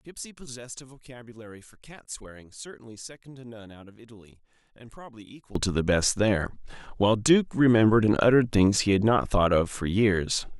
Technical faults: one channel inverted

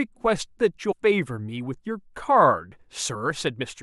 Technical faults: damaged data in a compressed stream

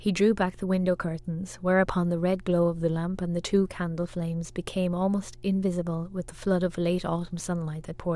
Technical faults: mains hum

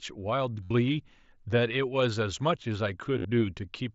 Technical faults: concealed Bluetooth headset packet loss

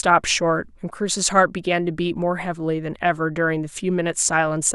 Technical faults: none

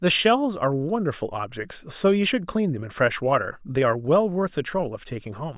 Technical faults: none

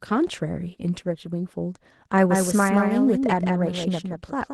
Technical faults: Opus voice compression; doubled audio track

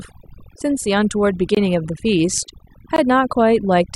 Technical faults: overdone noise removal; block of digital silence

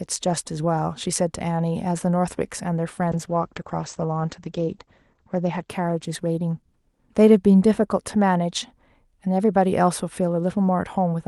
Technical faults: call bitrate drop

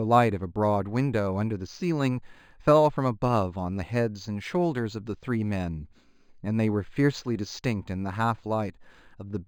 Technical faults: imaging from linear upsampling

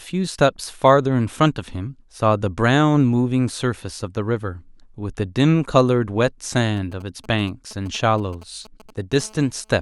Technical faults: GSM signalling bursts; GSM phone buzz

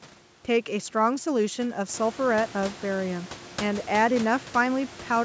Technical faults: none

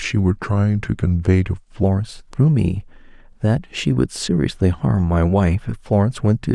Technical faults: section at the wrong speed

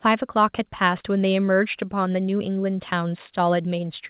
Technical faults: none

